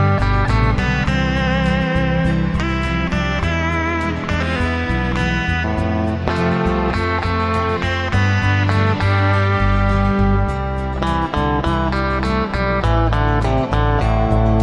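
No technical faults can be heard anywhere in the clip. Nothing in the audio breaks, drops out or changes character at any point.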